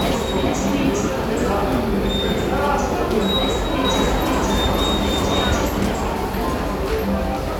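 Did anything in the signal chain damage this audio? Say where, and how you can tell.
Yes. From 3.85 s to 5.69 s the sound plays twice: a second full-band copy trails the first by about half a second, at roughly the same level. That copy has no decay or room colour, and it begins and ends abruptly at those two times, so it is not an echo. This is a doubled audio track, most likely from a routing or capture stage where a slower second path recorded the same signal again and mixed it back in.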